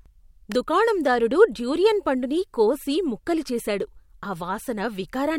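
An electrical switching spike lands at 0.52 s, just before "దుకాణందారుడు డ్యూరియన్ పండుని కోసి": a sharp snap sitting on top of the speech for a few milliseconds. It most likely comes from a nearby switch or static discharge arcing, with the audio line picking up that brief burst.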